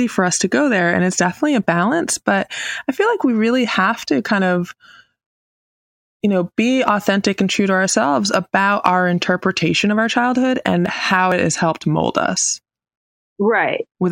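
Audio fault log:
8.86 s, hard clipping: after "true to ourselves about", a peak driven about 5 dB past full scale is cut flat, adding high harmonics heard as a brief crackle.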